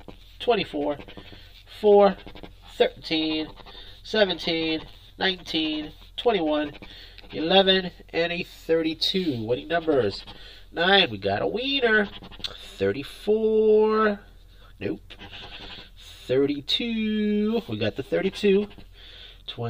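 From start to finish the sound is hollow and phasey, with a fixed comb of notches starting around 50 Hz and repeating at regular spacing. This is channel delay (comb filtering): one channel arrives roughly 10 ms late, and summing to mono cancels shared content at those frequencies.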